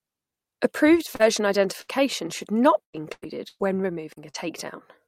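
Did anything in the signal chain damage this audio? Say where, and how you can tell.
Yes, the network path damaged this speech in four ways.

Short concealed packet loss, 1.15 to 1.22 s: about 40 ms never arrived in time, and the receiver extended the preceding sound to bridge it. It is heard as a brief smear. On a spectrogram, the continued sound runs on before blending back.

Lost packet rebuilt from error correction, 1.19 to 1.21 s: inside that same stretch, 20 ms was recovered from the low-bitrate redundant copy carried in the next packet. That frame sounds rougher and noisier, and a spectrogram shows a grainier patch.

Burst of packet loss, 1.81 to 1.90 s, just before "should not": about 60 ms in a row went missing. The last sound is held and fades as the gap lengthens, then the audio resumes further on. The waveform shows a decaying, repetitive stretch followed by an abrupt restart.

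Repeated packet loss (robotic sound), 2.83 to 4.36 s, after "should not": five separate gaps, the longest 110 ms, cover about a quarter of the span. Some were partly rebuilt. Repeated patching gives a choppy sound with pieces missing, seen on a spectrogram as recurring smeared blocks.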